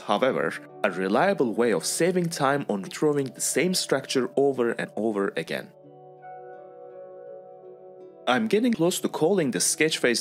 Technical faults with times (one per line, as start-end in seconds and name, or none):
2.86 compressed frames skipped
4.83-4.85 compressed frames skipped
8.73 compressed frames skipped